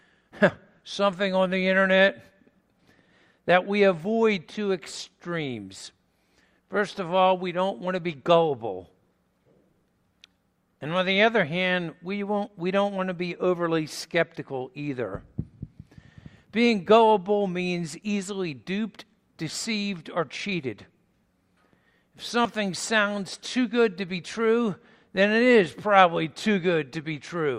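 At 16.47 s there's a small skip, and another at 22.45 s. Both come from overlap between stream segments. Two neighbouring chunks claimed overlapping time stamps, so the player trimmed what it took for duplicated material, except the sound wasn't really doubled. A few milliseconds simply disappear and the waveform jumps across the gap. The two skips land about 6 s apart, which lines up with 6-second segment boundaries.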